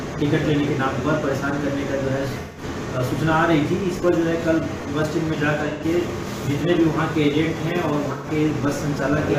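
AAC frame loss with concealment appears three times: 2.40–2.63 s, 5.68–5.84 s and 8.11–8.28 s, which fits three or four lost frames each. The decoder rebuilds each gap from the last good spectrum, so it sounds smeared and phasey rather than dropping to hard silence.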